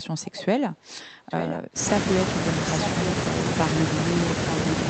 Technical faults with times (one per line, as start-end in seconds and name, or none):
0.24-0.42 echo leak
1.28-1.60 echo leak